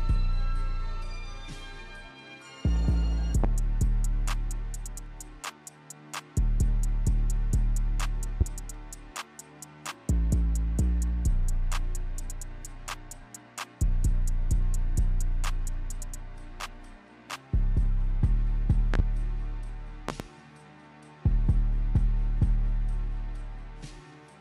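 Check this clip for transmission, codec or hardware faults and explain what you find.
There's one kind of fault here, a loud pop, turning up four times. Single pops land at 3.44–3.47 s and 8.41–8.44 s, and double pops at 18.94–19.02 s and 20.09–20.23 s, each peaking roughly 15 dB above the sound. The likely cause is a sudden voltage step or spike, from a plug, switch, static or driver glitch, that gets shaped by the downstream circuitry. You hear a sharp thump sitting on top while the sound carries on beneath it.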